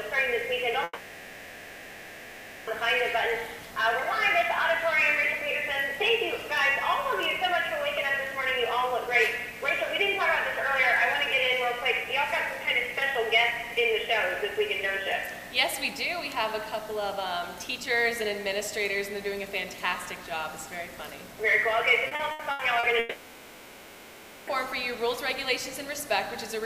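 A long network dropout runs from 0.83 to 2.70 s. For about 1.84 s the receiver has nothing new to play and stretches the last sound into a fading buzz or hiss, leaving only a brief instant of silence before the audio resumes further along, with that stretch gone for good. The likely cause is a stall in the network link.

Repeated packet loss (robotic sound) follows from 22.07 to 22.86 s. About five short holes, the longest 80 ms, are each patched by continuing the previous sound, so roughly a third of this span is filler. The sound turns choppy, with pieces missing.

Almost immediately after, a second long network dropout covers 22.99 to 24.50 s. The receiver fills about 1.48 s with decaying continuation and no silence at all, then rejoins later without the missing audio.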